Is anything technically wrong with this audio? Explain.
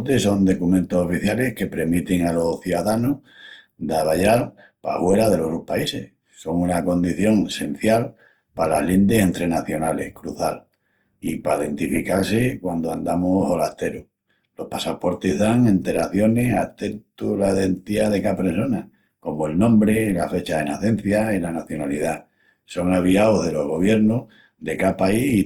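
Yes. Throughout the speech there is plainly audible damage consistent with Opus compression. The bandwidth stays full, reaching up to about 20.2 kHz, but the voice sounds grainy, rough and noisy rather than swirly. This likely comes from Opus in its music-oriented CELT mode at a low bitrate, around 24 kbps. It preserves each band's energy but runs short of bits, so it fills bands with folded or noise-like content instead of leaving gaps.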